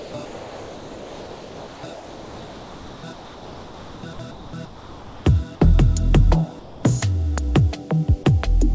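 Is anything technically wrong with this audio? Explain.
Yes. From 0.00 to 0.14 s the opening sound is swapped for steady noise, with about 50 ms of real sound lost. This is sound dropped by the voice detector, likely because it judged the start as background and sent nothing. Unlike ordinary comfort-noise gaps, actual sound goes missing, not just background.

Comfort noise in place of the background appears at 0.25 to 1.83 s, 1.93 to 3.03 s, 3.13 to 4.03 s, 4.31 to 4.53 s, 4.65 to 5.25 s, and 6.59 to 6.83 s. In these stretches the background, which sits about 19 to 22 dB below the loud parts, turns into smoother synthetic noise about 3 to 6 dB quieter. This is likely discontinuous transmission, with the receiver filling the pauses. It differs from a dropout because nothing in the foreground disappears. Through the call path, nothing above 8 kHz is heard.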